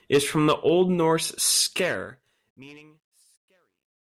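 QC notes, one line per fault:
1.62–4.05 s, truncation distortion on a fade: as the speech fades out from around 1.6 s, the tail turns gritty, worst from 2.98 to 4.05 s. The fade kept too few bits without dither, consistent with 12-bit steps.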